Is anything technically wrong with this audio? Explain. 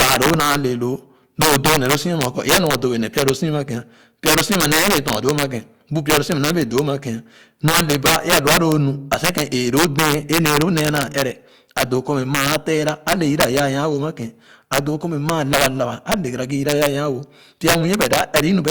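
Yes. Integer overflow runs through the whole speech recording. The signal is driven about 9 dB past the top of the integer range, and instead of being limited, each sample that exceeds it wraps around to the opposite extreme of the scale. Only a small share of samples, roughly one or two percent, cross that line, so the damage sits on the loudest peaks: sudden violent cracks, far harsher and more abrupt than ordinary clipping distortion.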